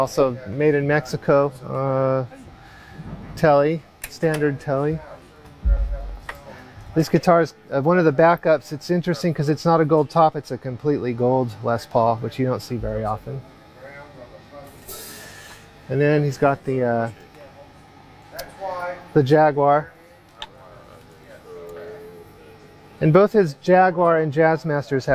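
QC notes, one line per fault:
No faults found. Nothing in the audio calls for a note.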